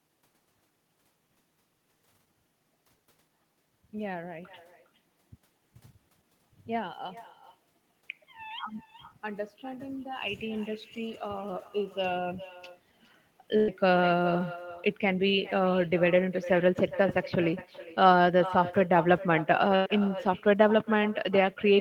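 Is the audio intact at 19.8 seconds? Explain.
No. A burst of packet loss runs from 19.76 to 19.88 s. Consecutive packets of the speech never arrived in time, so the receiver covered the hole by continuing the last sound for about 100 ms and letting it fade. A voiced sound turns into a short held buzz, and anything else into a dying hiss. When the speech returns, about 100 ms of what should have come in between is gone, so the resumed audio jumps forward.

The echo with no canceller, present throughout, also shadows this moment. The far end's loudspeaker feeds the speech back into its microphone, and nothing there removes it, so the sound returns after the network round trip. Here that delay is roughly four tenths of a second. The copy sits about 16 dB below the direct speech, and it sounds thinner, trailing each phrase. That includes whatever surrounds the gap.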